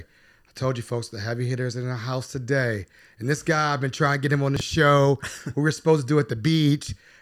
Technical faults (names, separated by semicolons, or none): chunks out of order